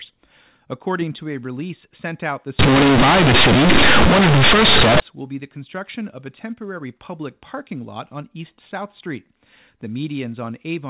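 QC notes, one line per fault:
2.59–5.00 s, companded audio read as linear: right after "a release sent out", the mu-law bytes get played as raw 8-bit samples without expansion. Every sign flip swings the output across half its range, so you get loud, buzzy distortion and heavy noise until "will be the construction".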